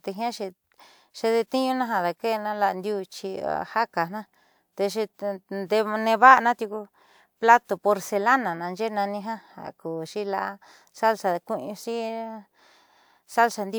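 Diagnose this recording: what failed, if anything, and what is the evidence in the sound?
No fault heard anywhere.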